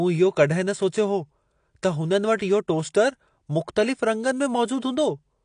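AAC compression runs throughout: nothing above 9.8 kHz, with dull, smeared speech and a fizzy, warbling edge, likely from an AAC-LC encoder at a low rate near 32 kbps.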